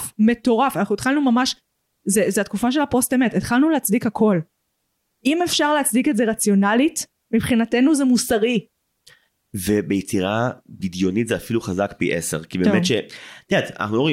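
No technical faults can be heard anywhere in the speech recording; the signal stays continuous and steady throughout.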